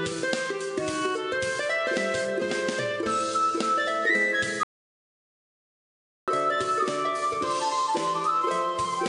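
At 4.63 s the sound cuts off abruptly and the clip falls into dead silence, with no room tone or background left underneath, until it resumes at 6.28 s. This audio dropout to silence removes about 1.64 s of material, and whatever was happening in that stretch is simply missing. The likely cause is a momentary loss of the input signal, such as a disconnected device, a failed link or an accidental mute, while recording carried on writing silence.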